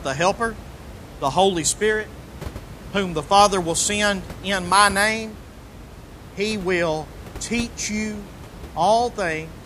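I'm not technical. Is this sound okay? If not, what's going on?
Yes, this recording is technically sound, with just some ordinary room noise sitting well below the speech, which is part of where it was recorded rather than a problem with the equipment.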